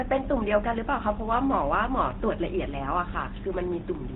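From start to finish the speech carries GSM full-rate codec damage, and it is plainly audible. The codec rebuilds each voice from a vocal-tract model excited by evenly spaced pulses, discarding most of the excitation detail, so vowels turn buzzy and gravelly, and nothing survives above 4 kHz. That grainy roughness, which fits a rate around 13 kbps, separates it from simple telephone band-limiting, where the sound is muffled but stays smooth.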